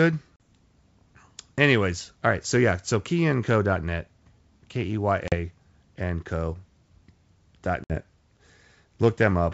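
Packet loss on an ADPCM call drops about two, two and three packets of speech at 0.36, 5.28 and 7.84 s (about 40, 40 and 60 ms), leaving hard-edged silent holes after which the decoder's predictor resyncs, with the speech returning slightly distorted before it settles. The wideband G.722 coding is clear through 7 kHz.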